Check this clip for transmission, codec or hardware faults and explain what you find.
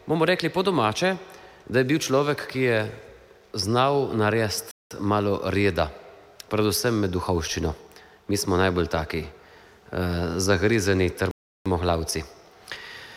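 Two playback stalls interrupt the clip, at 4.71 to 4.91 s and 11.31 to 11.66 s, lasting about 196 ms and 345 ms. The audio cuts to silence mid-flow and then resumes. The likely cause is the player's buffer running dry, or its audio thread being held up, so nothing reached the output until data flowed again. Both gaps are long enough to register as distinct dropouts rather than clicks, with the second noticeably longer.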